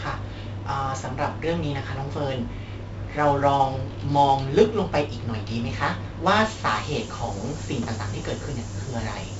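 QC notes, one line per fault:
Throughout: 4-bit ADPCM compression. Heavy gritty hiss rides on every loud syllable and rises and falls with the speech. Sharp onsets distort because the adaptive step lags. Nothing reaches above 7.7 kHz, so the sound is dull. This points to a 64 kbps stream.
6.69 s to the end: low bit depth with noise shaping. A thin, steady hiss suddenly appears, nearly as loud as the speech, and grows much brighter toward the top of the band. The coarse rounding points to about 6 bits, with its error pushed upward.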